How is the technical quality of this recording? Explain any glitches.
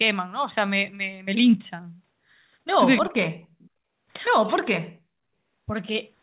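The speech sounds like a phone call, with nothing above about 4 kHz, which fits a narrowband G.711-style codec. There are a few call glitches.

Speech suppressed in double talk at 2.99–3.4 s, 4.44–4.5 s and 4.77–5.23 s: the voice drops away sharply, and the short middle dip is lighter. The likely cause is the echo canceller ducking everything while both sides talk.

Echo leak at 3.6–3.7 s: a very faint copy of the voice comes back about 295 ms late, probably loudspeaker echo the far end's canceller didn't fully remove.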